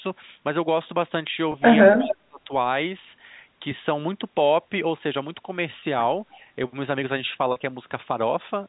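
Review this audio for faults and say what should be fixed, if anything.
Packet loss with pitch repetition occurs at 1.52 s, 5.8 s and 7.52 s. The gaps last 20 ms, 20 ms and 40 ms, each consistent with one or two lost 20 ms packets. The receiver filled each gap by repeating the last pitch period, so the sound briefly holds with a buzzy quality. On a spectrogram this appears as a short stretch of frozen, evenly spaced harmonic lines. In the waveform it looks like a run of identical repeated cycles. Prioritising voice packets on the network, or using a larger jitter buffer, would reduce these losses.

An echo leak runs from 1.93 to 2.16 s. A delayed copy of the far side's audio returns about 284 ms late, roughly 10 dB below the speech, most likely because a loudspeaker echo canceller failed to remove everything its microphone picked up. A spectrogram would show a fainter, time-shifted duplicate of an earlier pattern. 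Using a headset, or tuning the echo canceller at the loudspeaker end, would stop this.

Speech is suppressed during double talk from 1.98 to 2.51 s, about half a second, with the level dropping by roughly 35 dB at its deepest. The likely cause is that the echo canceller could not separate the local talker from the echo while both sides spoke at once, so it attenuated everything. On a waveform this shows as a sharp dip in the envelope, and on a spectrogram as a band of sudden darkness. A canceller with better double-talk detection would prevent it.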